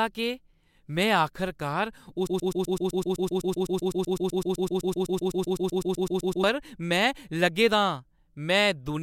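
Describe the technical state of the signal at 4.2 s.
At 4.2 s the signal is in the middle of a broken-record loop that runs from 2.27 s to 6.44 s, starting just after "केह् मैं आखरकार". A fragment of about 127 ms repeats exactly and back to back, 33 times, giving a rapid mechanical stutter in place of continuing speech. The likely cause is a stalled player, encoder or stream that kept re-sending the last buffered fragment, so the speech that belonged in that span is lost.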